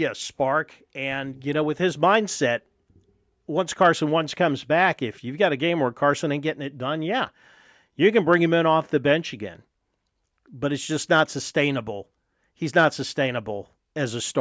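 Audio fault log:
No technical fault can be heard anywhere in this speech recording. Nothing calls for a timed entry.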